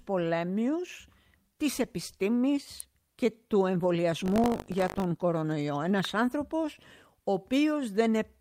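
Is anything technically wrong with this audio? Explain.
Yes. At 2.80 s, just before "και του", and again at 6.05 s, a sharp snap sits on top of the speech, likely an electrical switching spike from a nearby switch or discharge.

From 4.24 to 5.06 s, right after "και του", a robotic 50 Hz rattle rides the speech. This is buffer tearing: writer and reader cross each 20 ms period, splicing in a small slice of audio about 70 ms old.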